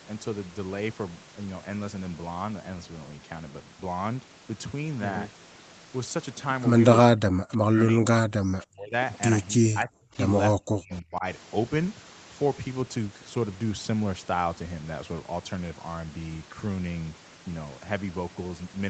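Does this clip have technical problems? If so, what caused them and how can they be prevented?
Yes. Speech suppressed in double talk: the speech dips by roughly 40 dB from 7.13 to 8.93 s, 9.58 to 10.16 s and 10.54 to 11.24 s, likely because the echo canceller ducked everything while both sides talked. Better double-talk detection or headsets on the far end would prevent it.

Echo leak: a faint copy, about 30 dB down and delayed 322 ms, slips through at 10.91 to 10.96 s, likely from loudspeaker pickup the canceller missed. Lower speaker volume or a headset would prevent it.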